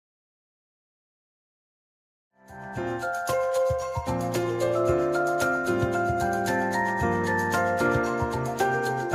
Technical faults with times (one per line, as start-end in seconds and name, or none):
none